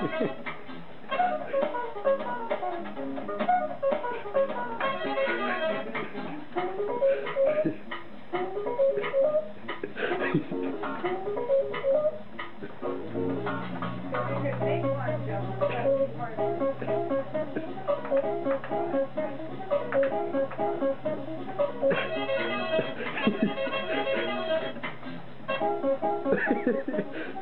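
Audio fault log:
throughout, USB whine: a fixed whine at 1 kHz, strongest at its 2 kHz harmonic and sitting roughly 45 dB below the sound, as USB frame timing leaks through power or ground; unlike mains hum, its pitch follows the 1 ms frame rate, not 50 or 60 Hz.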